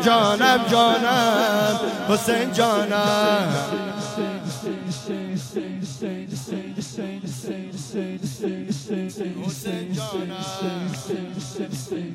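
Compressed frames skipped: a few 46.4 ms frames at 9.08–9.13 s and 11.64–11.68 s never decode, so the audio jumps ahead roughly a fifth and a seventh of a second.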